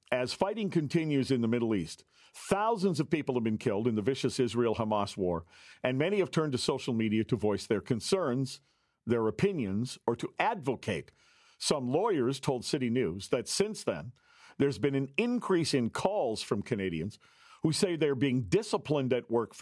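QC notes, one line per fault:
No faults heard anywhere in the speech.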